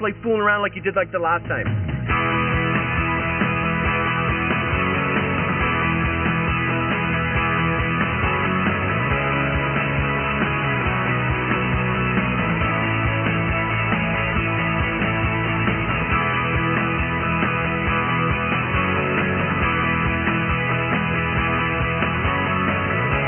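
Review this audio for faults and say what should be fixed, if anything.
No faults turn up in this audio, so nothing needs to be fixed.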